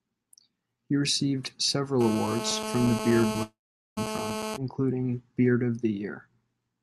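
GSM phone buzz runs from 2.01 to 4.57 s: a nearby 2G phone in a call bursts about 217 times a second, and the rectified pulses give a steady, raspy harmonic buzz about 6 dB below the speech.

Short concealed packet loss at 3.33 to 3.37 s: about 20 ms never arrived, and the receiver patched the hole by extending the preceding sound, heard as a brief smear.

A long network dropout likely follows at 3.43 to 3.99 s: the last sound is stretched into a fading buzz, then about 0.43 s of silence, and the speech resumes with that stretch missing, its upper band ending near 12 kHz as the call codec passes it.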